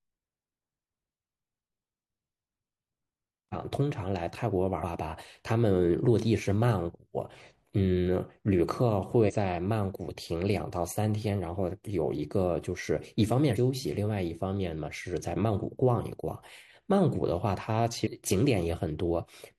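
At 3.49–3.54, 4.79–4.84, 9.20–9.32, 13.52–13.57 and 18.02–18.07 s, damaged data in the compressed stream makes the decoder misread frames and resynchronise, producing brief chirps, squawks, clicks or short holes in the speech. Each shows as a short broadband smear or abrupt waveform discontinuity.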